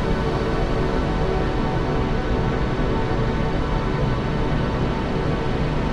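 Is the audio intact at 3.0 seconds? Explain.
Yes, the audio is intact at 3.0 seconds, with no fault at that moment.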